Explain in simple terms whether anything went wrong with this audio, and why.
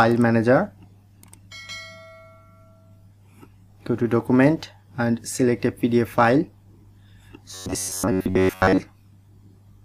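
From 7.54 to 8.80 s the sound turns into a stiff, metallic buzz near 94 Hz: robotic sound from repeated short buffers, likely from tiny snippets of about 11 ms being replayed over and over.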